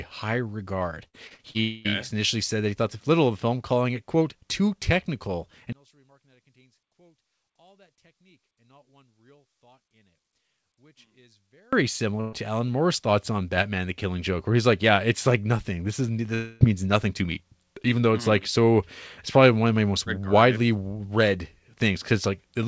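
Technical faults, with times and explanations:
1.08–1.57 s, repeated packet loss (robotic sound): four gaps land in about half a second, the longest 53 ms, and together they cover about a third of the stretch. Each hole gets filled by stretching the last bit of sound, then the real audio resumes, then another hole arrives. So you hear a choppy, mechanical stutter with small chunks of speech missing, about 180 ms lost in all.
1.61–1.87 s, long network dropout: right after "high regard" roughly a quarter second of audio never turns up, most likely a network stall. The receiver keeps extending the last sound as a buzz or hiss that dies away over about 240 ms instead of leaving silence, and speech picks up again at "initially said that he" with that piece simply gone.
5.73–11.73 s, one channel inverted: starting after "it quote too technical" the level falls by about 36 dB for six seconds, which points to one stereo channel likely having its polarity flipped. 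When the two channels are summed to mono, the centred speech, identical on both sides, cancels almost completely. What's left is only the tiny difference between channels, a faint ghost of the speech.
12.21 s, burst of packet loss: a run of packets goes missing, about 120 ms of audio. The gap is concealed by holding and fading the last sound, so you get a short buzzy or hissy smear where the real audio should be, then it jumps ahead to where the stream resumes, with that slice dropped.
16.34–16.63 s, long network dropout: another stall of about 260 ms, again likely a network hiccup. It's filled by a continuation of the previous sound that fades away rather than going silent, and the speech comes back at "means nothing to me" with the lost part missing. The G.722 call path at 64 kbps cuts off everything above 8 kHz, so the concealment buzz sits in that band too.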